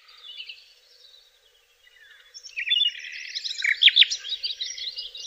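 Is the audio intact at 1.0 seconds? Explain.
No. At 1.0 s the audio is inside a channel delay (doubling) fault that runs from 0.0 to 3.69 s. One channel arrives about 92.9 ms behind the other, which fits a 4096-sample buffer, and the two are summed to mono. At that offset the late copy does not blend in as coloration. It is heard as a distinct doubling, a slap echo trailing each event at the same level as the original.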